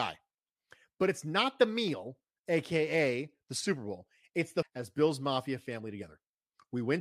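At 4.62 s the speech jumps abruptly ahead with a brief blip, likely a stream segment skipped, where one segment failed to load and playback continued.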